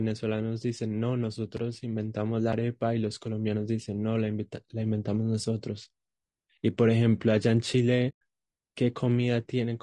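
Across the whole speech clip the voice sounds rough and grainy, with a hiss-like fill between the harmonics and a thin, somewhat synthetic top band. This is low-delay AAC compression, likely AAC-ELD at a low rate, around 32 kbps. Its short frames cannot separate closely spaced pitch harmonics well. On a spectrogram the harmonic stripes look smeared and noisy, with energy sitting in the gaps between them and a flattened, patchy region at the highest frequencies.

At 1.57 s and again at 2.53 s there is a block of digital silence, each lasting about 5 ms. The output buffer was likely not filled in time, and the 5.33 ms length fits a 256-sample buffer. The gap is too short to hear as a hole, so each one comes across as a tick or dip. On the waveform it shows as a flat silent line with abrupt vertical edges. On a spectrogram each appears as a thin full-height vertical stripe.

From 8.09 s to 8.21 s there is AAC frame loss with muting, a 120 ms gap that fits a run of several consecutive lost frames. 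The decoder zeroed the missing spectra, and the overlapping windows tapered the sound down and back up, so the result is a soft-edged dropout. On the waveform the envelope fades smoothly into a short silent stretch and back out. On a spectrogram it appears as a dark vertical band with blurred rather than sharp edges.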